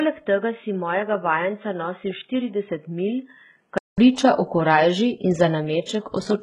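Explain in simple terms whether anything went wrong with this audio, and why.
For the first four seconds, the speech sounds dull and boxy. It is a little quieter, with a faint extra background noise. Nothing above about 3.8 kHz comes through. At 3.98 s there is a short gap of about 0.2 s, then fuller sound returns just before "priča o korajži in". This is likely an input switched to a poorer device.

Throughout the clip, the treble sounds gritty and metallic, and s sounds lisp. Nothing above about 13.9 kHz is present. The likely cause is heavy HE-AAC compression, which keeps only the lower sound and rebuilds the treble from copies of it.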